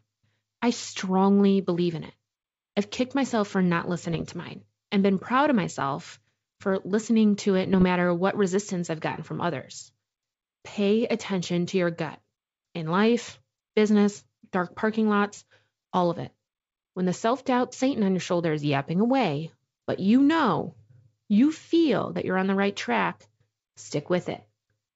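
At 4.11 to 4.25 s and 7.73 to 7.85 s, bit errors on an ADPCM link on the G.722 path produce pops and rough bursts that ring on briefly, unlike clean clicks, as the decoder's step size recovers.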